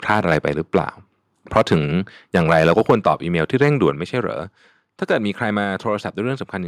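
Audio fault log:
0.09–0.48, 0.75–0.79, 1.55–1.76, 2.34–3.12 and 3.61–3.84 s: microphone overload. The loudest speech peaks are flattened with a harsh crackle, likely from input gain driving the converter about 3 dB past full scale (about 1 dB in the last run).
2.91 and 3.9 s: microphone volume stepped down. Speech and background drop abruptly, by about 2 dB and then about 4 dB, likely the call software cutting input gain in response to the clipped peaks.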